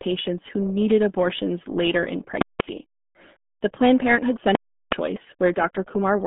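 From the start, the speech carries the RealAudio 14.4 codec's heavy damage. It sounds muffled and gargly, consistent with an 8 kbit/s dial-up speech coder. A spectrogram shows energy mostly between 200 Hz and 3.5 kHz, with a hard ceiling at about 3.8 kHz and nothing above it.

From 2.42 to 2.60 s, invalid numbers at full scale replace the audio for about 186 ms, which fits an 8192-sample processing block. A calculation produced infinite or invalid values that were clamped to the maximum. The result is a loud pop at each edge with silence between. The waveform shows a flat slab pinned at one extreme value, far beyond the speech peaks.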